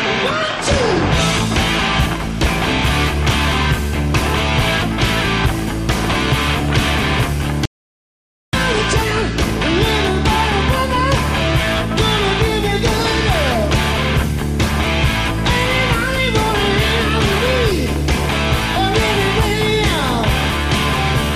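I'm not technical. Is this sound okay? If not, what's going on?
No. At 7.65 seconds the sound cuts out completely and returns at 8.53 seconds, leaving almost a second of dead silence with no background at all. This is an audio dropout to silence, most likely a brief lost connection while recording continued.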